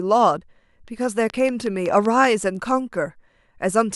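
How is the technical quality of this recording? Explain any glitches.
One real glitch in this speech: from 1.3 to 2.26 s there's a train of clicks, about seven regular pops at 5.3 per second, peaking around 5 dB above the voice. That's likely interference from nearby gear or a faulty connection or power supply.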